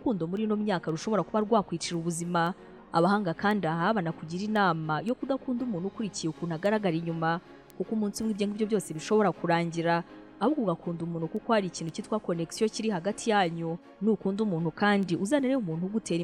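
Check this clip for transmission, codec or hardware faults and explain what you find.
A digital link is being read by a receiver running on its own clock rather than locked to the sender, producing word clock ticks from 0.37 s to 16.08 s. The two clocks drift apart by something like 40 parts per million, so about every half second they slip past each other, a single sample is dropped or repeated, and its neighbours are misread. The result is roughly thirty sharp ticks at a steady rate, of uneven strength, running across the audio.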